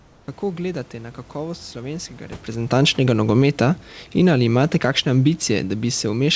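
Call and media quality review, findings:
Steady, featureless hiss replaces the room background, about 4 dB quieter, 0.00–0.28 s; comfort noise in place of the background, likely from discontinuous transmission with receiver-side noise fill.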